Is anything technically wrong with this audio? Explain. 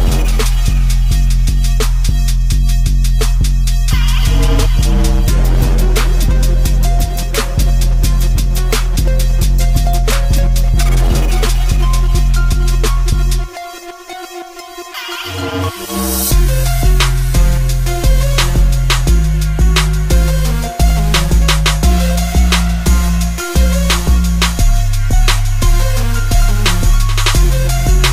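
No, nothing technically wrong can be heard anywhere in this audio; the signal stays intact and steady throughout.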